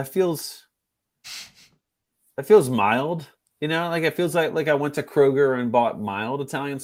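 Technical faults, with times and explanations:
No technical faults detected.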